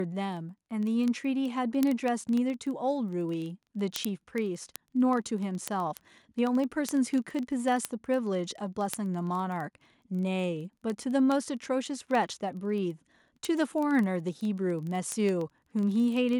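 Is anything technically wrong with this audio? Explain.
Yes. Word clock ticks run from 0.12 to 16.37 s. An unlocked digital receiver slips one sample about every 40 ms, roughly 500 ppm off, producing steady ticking throughout the speech.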